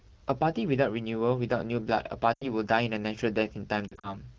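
At 2.33 to 2.50 s the speech smears and fades out for about 80 ms: lost AMR speech frames, where the wideband decoder, lacking valid frames, stretches the last good pitch and vocal-tract settings at falling gain. From 3.88 to 4.15 s the losses are scattered, about 100 ms across 160 ms with no run longer than 40 ms, giving brief warbles and dips. Unlike a hard dropout, neither gap cuts to clean silence.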